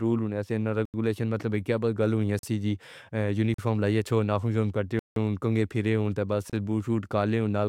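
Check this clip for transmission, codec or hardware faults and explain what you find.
The speech is broken by five blocks of digital silence, likely where the playback or processing chain failed to fill its output buffer in time and zeros went out instead. They fall at 0.85 s (85 ms), 2.39 s just after "مطلب کیا گلا ہووے" (43 ms), 3.54 s just before "لائیے چھو نافُوں چھو" (43 ms), 4.99 s (171 ms), and 6.50 s between "پھیرے ہوں تو بس" and "بُوٹ شُوٹ" (30 ms). The gaps sound like holes in the speech, the shortest a brief one. The first four lengths fit whole buffers of 2048 to 8192 samples.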